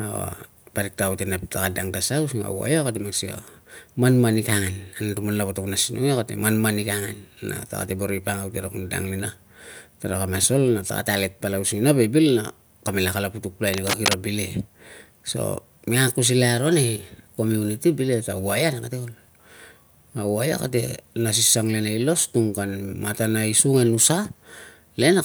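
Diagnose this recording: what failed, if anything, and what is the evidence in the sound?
Cable scratch noise in the analogue wiring: from 13.74 to 14.14 s a dense, uneven scratching burst sits over the speech at roughly the same level as it. The likely cause is a worn cable or connector being moved, its contact resistance fluctuating rapidly.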